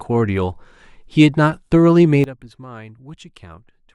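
Speech with a sudden gain jump at 2.24 s: level drops about 17 dB instantly, background noise included, and stays down to the end, likely an unramped digital gain change rather than a fade.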